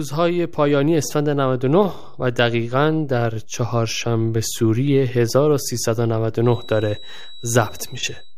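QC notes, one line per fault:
throughout: DC offset. The whole speech waveform sits shifted off zero by a constant amount, about -30 dBFS. It cannot be heard as a sound of its own. It shows instead as steady energy at the very bottom of the spectrum, right at 0 Hz. The shift eats into headroom, so peaks on one side of the waveform have less room before clipping. Any edit or cut can also produce a click where the offset jumps.
6.38 to 8.37 s: feedback whistle. A thin, steady tone at 3.9 kHz appears behind the speech and runs to the end of the clip. It sits well below the speech in level and swells and fades slowly rather than holding perfectly still. It never builds up or runs away. The likely cause is a loudspeaker-to-microphone loop held just at the edge of feedback. That loop keeps one high frequency ringing on.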